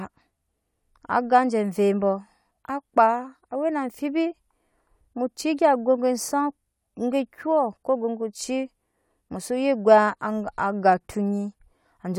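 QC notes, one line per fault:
No audible faults found; nothing to flag.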